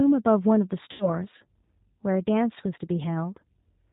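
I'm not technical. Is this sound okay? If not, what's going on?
No. The whole clip carries G.729 codec damage: a phone-grade speech codec rebuilds the voice from a simplified model, so it sounds muffled, slightly rough and synthetic. From 0.92 to 1.11 s there is VoIP packet loss concealed by the speech codec. About 80 ms of audio went missing, and the decoder filled the gap by stretching the last sound into a fading buzzy tone or noise, then took a moment to recover.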